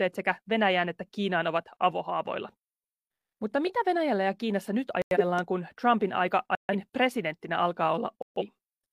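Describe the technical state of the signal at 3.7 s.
At 3.66 to 3.72 s a corrupt frame was decoded: roughly one damaged frame played with misread gains, producing a brief chirp, squeak, blip or noise burst peaking near -20 dBFS.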